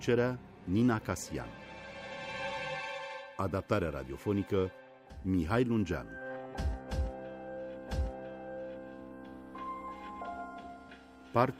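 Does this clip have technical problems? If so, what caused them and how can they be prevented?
Yes. At 7.88 s the audio jumps back with a small blip, and the preceding second of sound plays again, so the clip runs from 7.88 to 8.88 s with a repeat and ends up about 1 second longer. This is a stream segment repeated: the player fetched or queued the same chunk of the stream twice and played it in sequence, so the seam shows up as a blip. Prevention: have the player track segment sequence numbers and drop any duplicate before queuing it.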